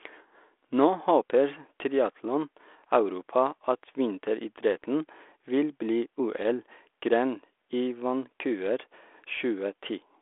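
No faults: the speech sits in a 300 Hz to 3.5 kHz telephone band from a 32 kbit/s codec path, with only a light coding texture.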